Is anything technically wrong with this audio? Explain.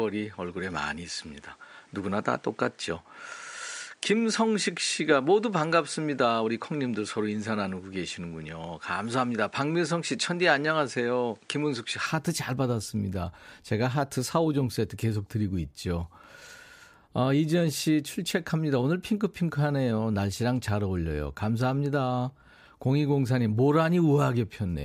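Yes. Up to 12.06 s, the speech has nothing above 10.5 kHz and carries its own noise, about 40 dB down. At 12.06 s the sound opens up, with no gap and no level jump. The likely cause is an input switched to a poorer device with a narrower band.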